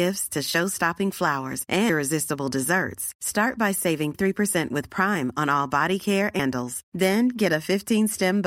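Speech with audio missing between chunks, likely from a recorder losing roughly a third of a second at each 2.5 s chunk boundary, leaving abrupt skips at 1.89, 4.14 (after "by saving") and 6.39 s (after "on all body care").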